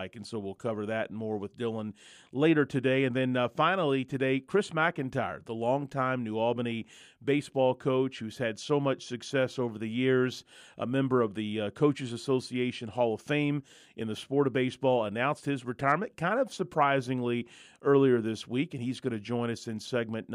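At 19.85 to 19.90 s, chunks out of order: one 23.2 ms chunk plays a chunk late, giving a brief jumbled flicker, and three vertical discontinuities show on the spectrogram.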